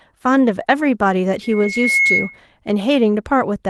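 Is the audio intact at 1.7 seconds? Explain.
No. A loudspeaker feedback squeal runs from 1.43 to 2.41 s. The microphone re-captures its own loudspeaker, and the loop gain exceeds one at 2.2 kHz, so that tone swells over roughly half a second to a few dB above the speech. That gradual self-reinforcing growth sets it apart from a steady interference whistle.

Also, from 1.63 to 1.77 s, a lost packet rebuilt from error correction fills the gap. About 80 ms of speech, which fits four 20 ms packets, plays from the low-bitrate copies carried in the following packets. It sounds rougher and noisier, but with no silence or dropout. Plain packet-loss concealment would instead smear or fade the sound.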